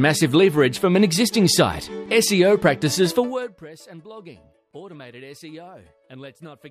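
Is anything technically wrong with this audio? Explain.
Yes. Zipper noise appears from 3.18 to 3.62 s, where the level falls by around 25 dB in 1 dB steps at about fifty steps a second instead of gliding down. Each jump in gain happens instantly, so every step leaves a tiny discontinuity in the waveform, and these add up to a rapid ticking or zipping over the sound for those 0.44 s.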